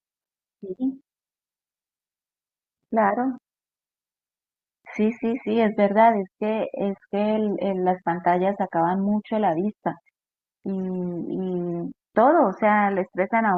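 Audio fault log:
No technical fault can be heard anywhere in the speech, and the signal stays steady and intact throughout.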